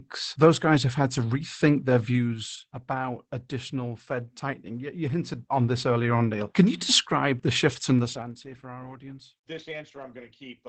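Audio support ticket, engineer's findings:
Opus voice compression, whole clip. Speech muffled and slightly hoarse, with a faint robotic edge. On the spectrogram there is a flat ceiling near 8 kHz with nothing above it, and smeared, grainy harmonics below. This points to SILK-mode wideband coding at a low bitrate, around 12 kbps in 20 ms frames. The excitation is coded coarsely, which roughens the voice.

Zipper noise, 7.94–8.36 s, between "you describe the shifts" and "here for our audience". Fine ticking or zipping rides on the speech while the level drops. The gain falls by about 15 dB in roughly 2 dB steps, around 20 per second, with no smoothing between them. Each jump leaves a small click. On the waveform the envelope descends as a staircase, and the spectrogram shows faint vertical broadband lines at each step.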